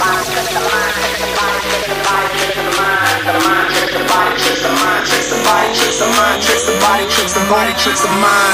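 From 1.06 s to 7.91 s a short click recurs every 1.37 s, about seven in all, each a brief discontinuity in the waveform. The regular spacing points to clock drift buffer slips: two devices likely running on independent clocks that differ by roughly 1000 ppm, so the buffer between them drifts until a block of around 70 samples is dropped or repeated, producing a click at each slip.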